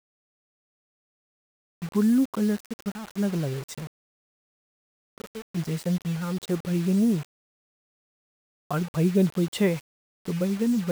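From start to finish, the speech carries a grainy distortion that rises and falls with the sound. Quiet passages turn gritty. The softest moments sputter between two levels or drop straight to silence. The error sits roughly 25 dB below the signal. This is low bit depth without dither. The likely cause is rounding to very few levels with no added noise, which fits a 5-bit signal. The error tracks the speech instead of staying constant.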